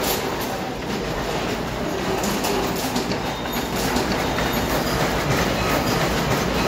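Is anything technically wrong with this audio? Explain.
Yes. From 3.73 s to the end, a doubled audio track appears: a full-band copy of the sound trails about a second behind, at roughly equal level, likely from a second, slower capture path. It starts abruptly, with no decay, and shows as repeated waveform shapes and duplicated spectrogram patterns offset by one second.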